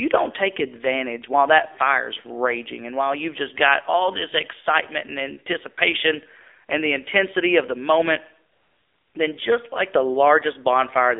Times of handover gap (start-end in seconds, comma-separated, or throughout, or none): none